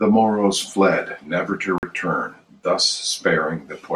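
At 1.78 s the speech cuts out abruptly for about 46 ms, then picks up at 1.83 s as though it had kept running underneath. That's a Bluetooth dropout, most likely a couple of audio packets arriving too late for the headphones and getting dropped.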